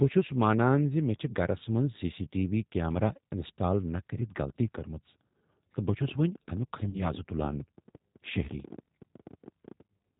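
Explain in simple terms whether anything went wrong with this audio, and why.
Three things went wrong. Throughout the recording, the speech has been squeezed through the G.729 codec, a phone-call format that keeps only the lower half of the normal voice range and rebuilds the voice from a simple model. That makes it sound dull, slightly rough and artificial. Unlike plain muffling, the damage here is the synthetic, rough texture.

From 5.89 s to 9.81 s, a train of clicks ticks over the sound, about a dozen per second at an uneven pace, roughly fifty in all and about as loud as the speech. They keep going during pauses too, which shows they come from outside the voice, likely interference or a faulty connection or power supply.

Around 6.90 to 6.97 s there is VoIP packet loss concealed by the speech codec. About 40 ms of the call never arrived, and the decoder filled the gap by stretching the last sound into a fading buzzy tone or noise. 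Unlike a clean dropout, there is no silence, and the voice stays weak or distorted briefly afterwards.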